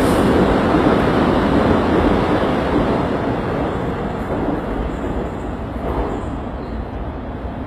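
The sounds carry HE-AAC compression damage throughout: the treble is bright but gritty and metallic, likely from spectral band replication rebuilding the upper band at a low bitrate, around 20 kbps. A spectrogram shows copied, smeared high-frequency texture above a sharp crossover.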